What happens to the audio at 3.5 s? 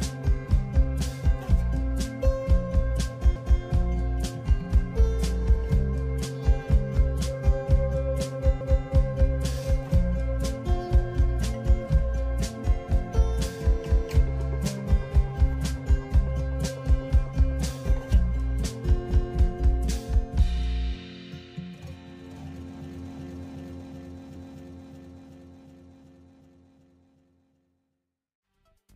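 At 3.36 to 3.61 s, overlapping chunks cause a stutter: the next 5 s chunk begins before the previous one ends, so 250 ms is replayed. On the waveform and spectrogram that 250 ms pattern appears twice in a row, with a discontinuity at the join.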